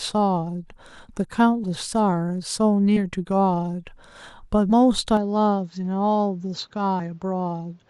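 At 1.63, 2.96, 4.69 to 4.72 and 6.99 s, compressed frames are skipped. Whole 10 ms frames, roughly 20 to 40 ms of audio, are lost, so the audio jumps ahead at each join. It shows as a vertical seam on a spectrogram.

From 5.17 s the input has likely switched to a poorer device, with no gap at the change. The sound turns duller and about 5 dB quieter. The spectrogram goes empty above 7.6 kHz, and a new noise floor appears roughly 40 dB down.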